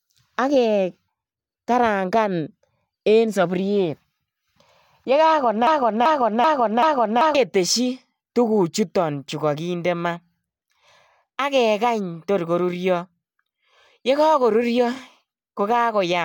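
From 5.67 to 7.35 s the speech falls into a broken-record loop. One 0.39 s fragment plays four times back to back, likely because a stalled player or stream kept resending it. Unlike an echo, each repeat is exact and undecayed, and the intended speech is lost.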